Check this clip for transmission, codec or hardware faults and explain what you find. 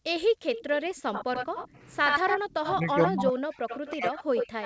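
Two faults recur in this speech clip: an echo leak in three stretches and speech suppressed in double talk in two. The audio stops at 8 kHz, which fits a wideband call path such as G.722.

Echo leak, 0.55–1.68 s, 2.07–3.07 s and 3.67 s to the end: a second copy of the talker trails 77 ms behind, giving a hollow doubling. It sits about 10 dB below the speech in the first and last stretches and rises to about 5 dB below in the middle one. The likely cause is a loudspeaker on the far end whose echo canceller let part of the pickup through and sent it back.

Speech suppressed in double talk, 2.74–3.39 s and 3.92–4.16 s: the talker's level sags and breaks up while the far side's sound is playing. The first dip drops around 20 dB across about half a second. The second is deeper, around 35 dB, over about a fifth of a second, and nearly cuts the speech out. This is likely an echo canceller that could not tell the local talker from the returning echo and turned both down together.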